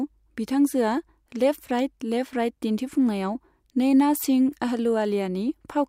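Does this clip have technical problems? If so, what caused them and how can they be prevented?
No, the signal shows no technical problems, so there is no cause to identify and nothing that needs preventing.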